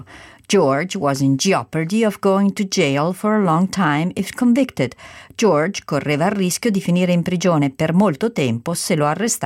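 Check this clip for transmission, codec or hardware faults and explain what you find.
No transmission, codec or hardware faults are audible anywhere in the recording.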